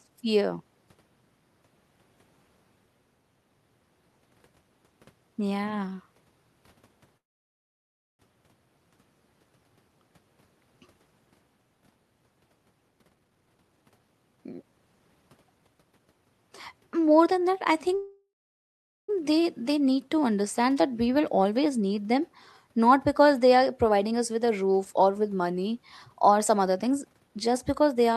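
At 7.17 s the speech stops dead for about a second, until 8.21 s, with only a brief tail of the last sound before near silence. That's a call audio freeze, likely from packets stalling in transit so the jitter buffer ran dry. When the audio resumes it carries on where it left off, so nothing is lost, but everything after it now runs about a second late. The same thing happens again from 17.95 to 19.10 s, a gap of roughly 1.1 s with a much longer fading tail before the silence.

The jitter buffer speed-up works in the other direction. Once the delayed audio catches up, the buffer is holding more than it wants, so it trims out tiny pitch-period slices over and over to claw the delay back. The pitch stays put but the talking gets rushed. It's most obvious from 12.88 to 16.06 s, running at 131% speed and dropping around a second in total. Gentler passes follow at 21.08–22.06 s (109%), 24.92–25.33 s (111%) and 26.50–28.16 s (108%).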